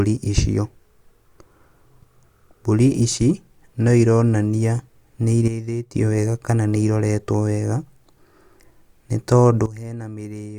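At 5.48 s the speech and its background noise drop together by about 10 dB, then return at 5.94 s. From 9.66 s to the end they fall again, by about 15 dB. Each is a sudden gain jump: the level changes in a single step, with no fade, most likely because a digital gain setting was applied instantly, from one sample to the next, rather than ramped.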